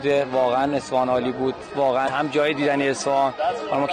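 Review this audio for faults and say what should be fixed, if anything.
At 2.05 to 2.09 s there is a short burst of damaged data in a compressed stream: for about 40 ms part of the encoded stream was corrupted, so the decoder misread those frames, lost sync and had to hunt for the next valid frame header. It comes through as a brief glitch in the sound. On a spectrogram it shows as a narrow vertical smear of broadband or oddly banded energy that breaks the surrounding pattern, and on the waveform as a short, jagged discontinuity. To prevent it, carry the stream over a transport with checksums or error correction and verify the file's integrity before decoding.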